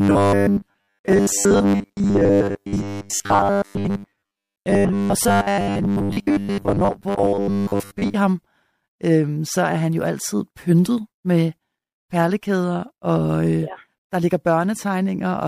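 From 0.01 to 8.16 s there's robotic sound from repeated short buffers: a rigid 100 Hz buzz, likely from about 10 ms chunks looping while most real speech gets skipped.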